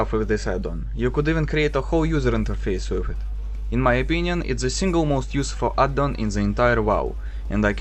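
From 6.26 s to the end at 7.80 s, a steady low 60 Hz tone with some low harmonics sits roughly 20 dB beneath the sound. This is mains hum, where power-line current leaks into the signal through a ground loop or a nearby transformer.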